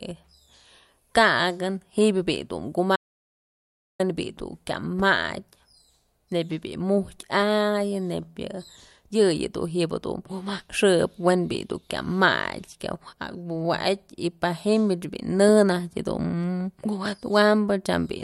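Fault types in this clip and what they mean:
Audio dropout to silence: the speech cuts off abruptly at 2.96 s and returns at about 4.00 s, leaving roughly 1.03 s of dead silence with no room tone. The likely cause is a lost input, with the recorder writing silence meanwhile.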